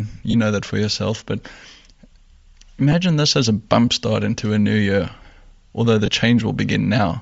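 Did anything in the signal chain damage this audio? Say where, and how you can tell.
Yes. At the codec stage, the whole speech clip carries plainly audible compression damage. The upper band sounds filled with noise, giving a breathy, grainy edge. This is likely Bluetooth LC3 compression, the LE Audio transform codec, and the sound fits roughly 32 kbps with 10 ms frames.

At the wireless link, lost LE Audio frames break the sound at 0.31 to 0.35 s, at 2.92 s, and at 6.06 to 6.08 s. Each gap becomes a brief noisy smear. The decoder covered it by repeating the last spectrum with scrambled signs.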